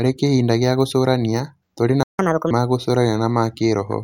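The player likely ran dry or was blocked, so this speech clip falls silent for 0.16 s in a playback stall from 2.03 to 2.19 s, right after "gĩa gũcũrania tũrĩ na". It then plays its backlog in a catch-up at higher speed, 1.5 times normal from 2.19 to 2.51 s, raising the pitch by about seven semitones before settling back.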